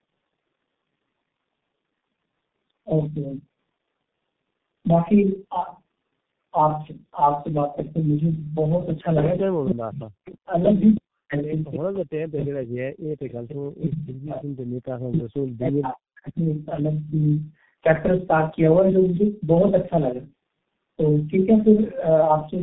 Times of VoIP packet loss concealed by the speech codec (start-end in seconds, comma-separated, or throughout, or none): none